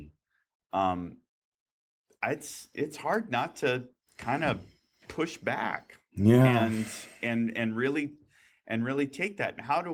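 Nothing stood out as a technical fault on listening to this speech recording.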